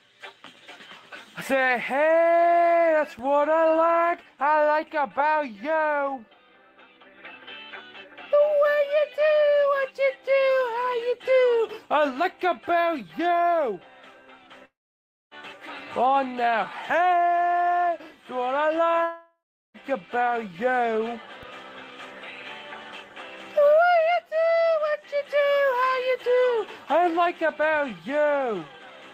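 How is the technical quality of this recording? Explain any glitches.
The recording has two distinct faults: a DC step in the waveform and a pair of gaps where the audio is lost.

At 3.19 s something upstream, such as a converter recalibrating or an offset-carrying input being switched in, shifts the waveform's zero line, and the offset holds until 21.43 s, when it steps back. Each jump is heard as a low thump or click. Between the two, the sound carries on unchanged, riding on the displaced baseline.

At 14.65 to 15.34 s and again at 19.03 to 19.77 s, the audio breaks off, most likely from a long network dropout in which no packets arrived. The receiver stretches the last sound into a fading buzz or hiss that decays into silence, and the audio resumes later with about 0.66 s and 0.72 s of material missing.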